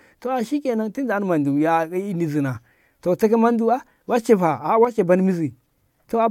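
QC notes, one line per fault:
4.85–4.99 s, one channel drops out: for about 140 ms the speech level falls abruptly by about 6 dB, then returns just as suddenly at full level. The step has no fade on either edge, so it reads as a brief hole rather than a natural dip. The cause is likely the loss of one stereo channel: material common to both sides is halved once summed to mono, and anything carried only on the lost side vanishes for that span.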